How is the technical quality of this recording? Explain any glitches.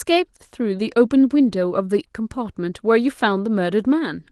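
No glitches to report: the speech carries only the light, full-band character of Opus voice compression, consistent with a hybrid-mode stream at around 20 kbps, and nothing in it registers as a fault.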